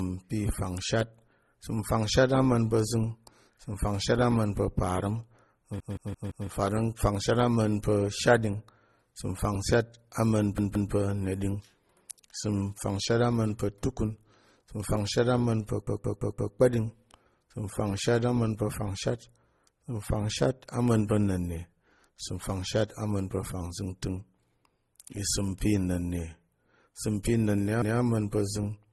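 Throughout, the speech shows layered transcoding between lossy codecs, likely MP3 then Opus. Nothing sounds above 12.2 kHz. A repeated buffer stutters at 5.80, 10.58, 15.87 and 27.82 s. Each 171 ms piece replays with hard joins, which fits an 8192-sample buffer.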